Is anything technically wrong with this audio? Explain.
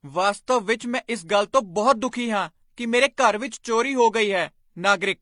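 Yes. The speech sounds like it went through transcoding between lossy codecs, and that runs the whole way through. Nothing comes through above 10.8 kHz, so the top end feels capped and a bit dull. You can hear two flavours of compression smearing together, which fits a low-rate Vorbis encode, around 31 kbit/s, being re-encoded to HE-AAC at 48 kbit/s. The second encoder likely wasted bits preserving the first one's artefacts and then added its own.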